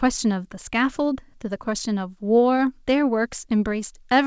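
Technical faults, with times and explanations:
Nothing here counts as a fault: the speech came over a normal call path, and the way everything above 8 kHz is simply absent fits a wideband codec such as G.722 doing its ordinary job.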